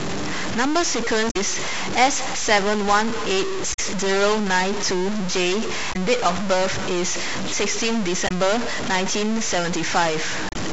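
From the start and throughout, the speech carries a distortion, and the pauses fill with a steady hiss instead of falling silent. That is the mark of a stuck bit, likely one data bit held fixed by a faulty line or converter. Unlike ordinary clipping, the grit doesn't ease on quieter passages.

On top of that come five brief glitches from damaged data in a compressed stream, at 1.27–1.36 s, 3.70–3.79 s, 5.89–5.96 s, 8.24–8.31 s and 10.49–10.56 s. At each one the decoder misreads corrupted frames and resynchronises on the next header.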